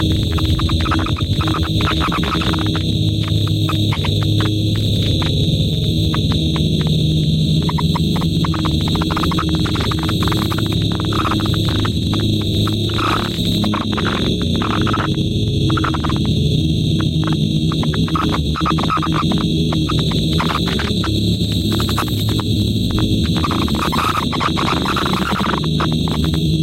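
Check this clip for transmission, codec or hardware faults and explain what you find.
There is one fault, present for the whole clip: gain pumping. The gain swings by about 5 dB, which leaves loud and soft parts squashed toward one level. The likely cause is input gain set far too high, with a fast limiter or compressor clamping down on each peak and releasing afterwards. On a waveform the envelope looks flattened, and on a spectrogram the noise floor brightens between events and darkens beneath them.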